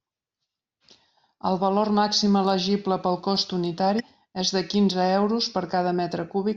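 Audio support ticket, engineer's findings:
Damaged data in a compressed stream, 3.99–4.01 s. Corrupt bytes in the encoded speech stream; decoder misreads the affected frame, loses sync, then hunts for the next valid frame header and relocks. Audible result: a brief blip of about 20 ms interrupting the speech, then clean playback resumes.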